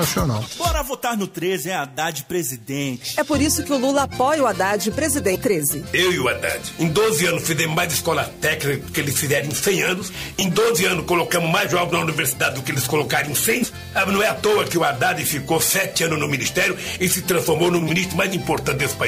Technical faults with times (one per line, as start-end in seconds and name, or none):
0.93 damaged data in a compressed stream
5.32-5.36 damaged data in a compressed stream
11.33-11.36 damaged data in a compressed stream
13.60-13.64 damaged data in a compressed stream
17.88-17.90 damaged data in a compressed stream